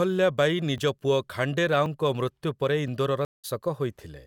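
At 0.78, 1.86 and 2.88 s the likely cause is a dropped buffer (overrun): the software fell behind and the hardware overwrote unread samples. The speech jumps ahead each time, skipping roughly 15 ms, then about 5 ms, then roughly 15 ms.

From 3.25 to 3.45 s a stream reconnect occurs: the connection broke, the player restarted its decoder mid-stream, and the speech falls silent for 187 ms, then resumes about a fifth of a second further on.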